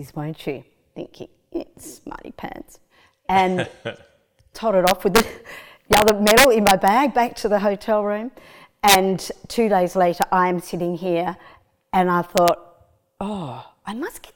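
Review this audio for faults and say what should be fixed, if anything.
Integer overflow cracks this speech at 4.87–5.20, 5.93–6.88, 8.88–8.95, 10.22 and 12.38–12.48 s. Peaks of up to about 3 dB over full scale wrap to the opposite sign. On the waveform they show as full-height vertical jumps, and on the spectrogram as broadband vertical streaks.

Use saturating arithmetic or a limiter before the integer conversion so that peaks clamp instead of wrapping.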